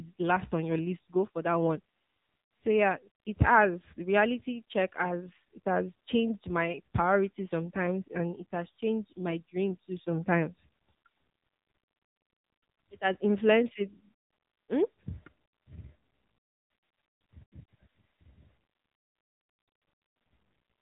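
From start to finish the speech carries AMR narrowband mobile codec damage: nothing passes above about 3.8 kHz, and the coarse vocal-tract modelling leaves a plainly buzzy, synthetic edge, consistent with a low mode around 7.4 kbps.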